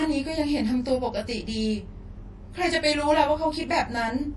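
Speech runs through the whole clip with two faults present from start to finish. The first is channel delay (comb filtering): one channel arrives roughly 20 ms behind the other, and when the two are summed to mono the shared content cancels at regularly spaced frequencies. The first notch sits somewhere around 20 Hz, and the repeating notches above it give the voice a rough, slightly doubled quality. The second problem is audible codec damage, with the top end cut away completely above 11.4 kHz. Short of bits, the encoder has dropped weak spectral components, and these flicker in and out from frame to frame, producing a watery, swirly texture, metallic chirping on sibilants, and smeared consonant attacks. The likely cause is MP3 compression at a low bitrate, in the region of 48 kbps.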